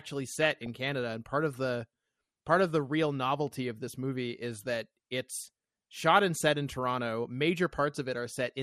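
Throughout, the speech sounds dull and granular with a gurgling edge, likely MP2 compression at a low rate near 80 kbps starving upper sub-bands of bits. DAB burbling occurs at 0.42–0.67 s, 5.39–5.48 s and 8.30–8.40 s, where bit errors corrupt sub-band levels and put short blips of noise into single sub-bands.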